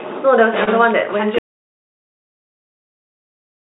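At 0.64 to 0.69 s there is a short concealed packet loss: about 20 ms of audio failed to arrive, and the receiver bridged the hole by extending the preceding sound for roughly 27 ms before blending back. It sounds like a brief smear or wobble. On a spectrogram, the bridged section is capped at 4 kHz like the rest of the clip, which fits a G.711 mu-law call path.

From 1.39 s to the end, an audio dropout to silence cuts the speech off mid-flow, with no room tone remaining. The waveform drops to a flat line and the spectrogram goes fully blank. The cause is likely a lost input or failed link while recording continued.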